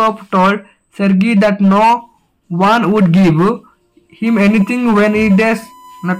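From 4.26 s to the end, a fixed 1 kHz USB whine, current from 1 ms bus frames leaking in, sits about 25 dB down, far above 50 to 60 Hz mains hum.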